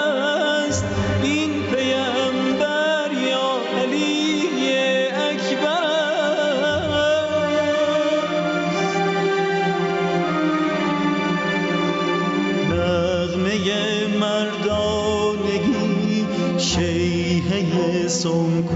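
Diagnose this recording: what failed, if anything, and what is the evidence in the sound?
Gain pumping runs through the whole recording. The gain swings by about 10 dB, pulling the level down each time a loud sound arrives, then creeping back up as the sound decays. Loud and quiet passages sit unnaturally close in level, giving a squashed, breathing quality. The stage is the input gain and dynamics processing. The likely cause is microphone gain set far too high, with a fast limiter or compressor pulling the level down on each peak. Above this, the call path's bandwidth stops at 8 kHz.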